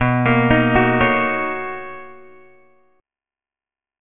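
Aliasing runs throughout the audio: it was taken down from 44.1 kHz to a 6 kHz rate without an anti-aliasing filter, so content above 3 kHz folds back below that edge as unrelated, gritty tones, fairly strong relative to the wanted sound, with the spectrum crowding hard against 3 kHz.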